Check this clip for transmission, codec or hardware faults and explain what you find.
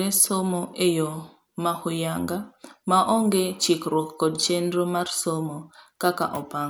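Nothing in the recording points to a problem in transmission, encoding or the hardware. The speech carries no audible disturbance at any point.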